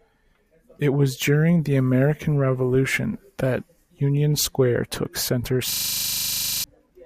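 From 5.72 to 6.64 s, after "took center", a system hang loop replays one stuck 40 ms buffer: a 25 Hz buzz, with identical waveform cycles and evenly spaced spectrogram stripes.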